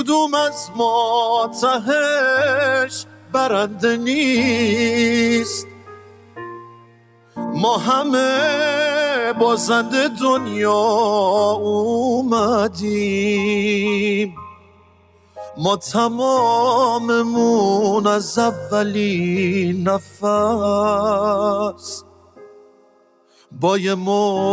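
The audio has passed through a call's microphone path, with nothing above 8 kHz, and a speech noise suppressor applied to music or sounds stays active throughout, pumping steady and decaying material by around 10 dB. Sound cut by the noise suppressor is heard at 3.03–3.34 s, 5.64–7.37 s, 14.3–15.38 s, 20.01–20.23 s and 22.0–23.51 s, where sustained content sinks by about 12 dB (about 11 dB at 20.01 s) because the suppressor treats it as noise.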